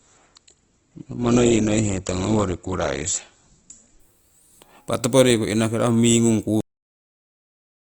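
From the start to 4.0 s, the adaptive stream starts at a low bitrate. The speech has nothing above 8.1 kHz and stronger codec artefacts, which fits a low-rate Opus stream at 12 kbit/s. At 4.0 s it jumps to a better Opus 64 kbit/s version with no gap, unlike a rebuffer stall.

At 6.61 s there is a cut-off end. The final buffers never played, so the speech stops mid-sound and drops straight to digital silence with no decay, unlike a fade-out or a natural ending.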